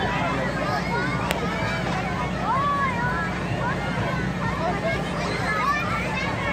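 A single sharp snap cuts across the sound at 1.31 s, peaking near about -5 dBFS. It is likely an electrical switching spike, a nearby arc picked up by the audio line.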